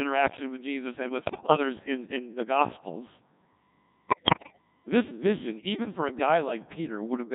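The whole recording passes through the Codec 2 vocoder, with heavy damage. The buzzy, robotic timbre fits a rate near 1.6 kbit/s. Only pitch, voicing, energy and a spectral envelope survive. The decoder rebuilds speech from sine waves, so the real waveform is lost.

From 1.17 to 1.57 s, between "with jesus and" and "in in the gospels", bit errors on digital voice radio strike. The span fits about nine corrupted frames at roughly 15 percent bit errors. Flipped bits scramble each frame's pitch, level and spectrum. The sound warbles and bleeps into gibberish. It happens again from 4.08 to 4.61 s, just before "this vision even for". That burst fits about twelve frames.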